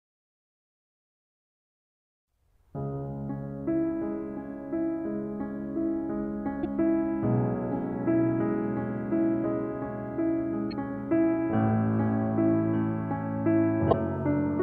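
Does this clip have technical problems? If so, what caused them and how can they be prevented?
Yes. Damaged data in a compressed stream causes short blips in this music at 6.60–6.65 s, 10.70–10.73 s and 13.89–13.94 s, where corrupted bytes make the decoder misread frames and resynchronise. Verifying transfers with checksums and error-protected delivery prevents it.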